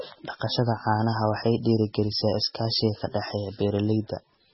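An encoder starved of bits, likely MP3 compression at a very low rate in the region of 16 kbps, has shaped the speech from start to finish. With so little to spend, it has cut everything above about 5.6 kHz and discarded weaker frequency lines, which flicker in and out between frames. The result is dull, band-limited speech with a watery, swirling texture, metallic chirping on s sounds, and smeared consonant attacks.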